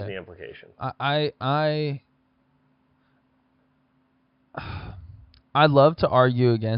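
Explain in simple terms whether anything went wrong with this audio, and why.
Nothing went wrong: no audible fault turns up anywhere in the speech.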